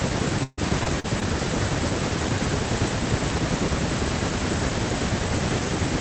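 Repeated packet loss (robotic sound) from 0.43 to 1.23 s: four gaps, the longest 140 ms, were patched by stretching prior sound, leaving choppy speech with pieces missing.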